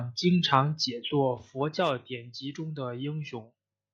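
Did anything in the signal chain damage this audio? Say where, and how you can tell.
No, nothing in the signal chain audibly damaged this speech, and the signal holds together as expected throughout.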